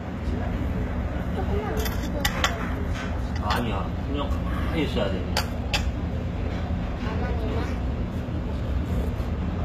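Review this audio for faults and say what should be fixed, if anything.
Throughout the clip the top end sounds bright but false: the treble has a gritty, metallic sheen, and nothing at all comes through above 14.8 kHz. This is likely HE-AAC compression. The lower band is coded directly, and the treble is rebuilt by copying it upward under a coarse envelope, so the harmonics don't line up across the crossover. The damage points to a very low bitrate, around 20 kbps. To prevent this, encode at a higher bitrate with plain AAC or another full-band codec rather than relying on spectral band replication.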